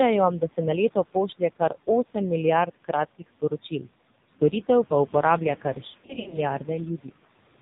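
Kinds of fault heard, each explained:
Noise suppressor artifacts: background noise is pulled down by about 17 dB between phrases and rises under the speech, and unlike codec warble, this pumping tracks speech pauses.
AMR narrowband mobile codec: nothing above 4 kHz survives, and heavy damage at a very low bitrate, around 5.9 kbps, gives a buzzy, synthetic voice throughout, not just in gaps.
Speech cut by the noise suppressor: from 3.19 to 3.87 s and at 7.03 to 7.17 s, soft parts sound swallowed, dropping up to about 19 dB, while the codec sound stays unchanged.
Lost AMR speech frames: between 5.88 and 6.40 s, scattered frames vanish over about 440 ms, giving smeared, fading dips and rough recoveries, distinct from suppressor cuts that simply turn sound down.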